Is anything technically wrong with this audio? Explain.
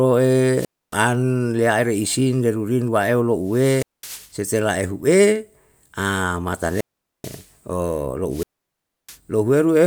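Yes. The speech suffers wireless microphone squelch dropouts, four of them: 0.50 to 1.01 s, 3.44 to 4.35 s, 6.54 to 7.52 s, and 8.29 to 9.18 s. Each time the FM signal fades, hiss rises, and the receiver's squelch shuts the output, leaving a gap of near silence of roughly 275, 208, 436 and 656 ms respectively before the voice comes back.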